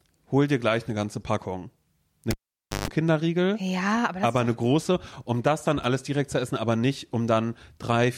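A cable pulled and plugged in interrupts the speech between 2.31 and 2.88 s. A sharp pop marks the moment the live lead comes out, and the signal drops to near silence for about 0.52 s. As the plug goes back in, only its tip touches at first, so the unscreened contact picks up 50 Hz mains buzz for roughly 0.14 s. A second pop follows as the connection seats fully and the sound returns.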